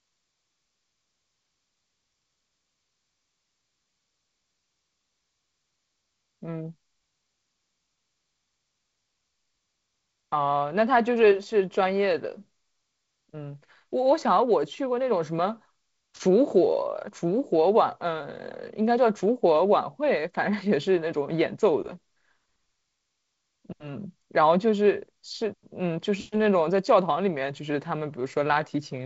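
No technical faults can be heard anywhere here.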